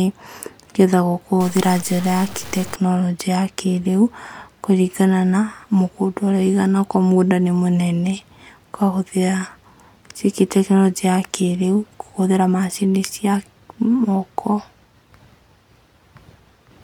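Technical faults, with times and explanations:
1.40 to 2.76 s, stuck bit: the speech turns harsh and buzzy, and its quietest moments fill with a noisy hiss. This is likely one data bit held fixed, so roughly half the samples are offset by a step of around -30 dBFS, tracking the waveform's shape.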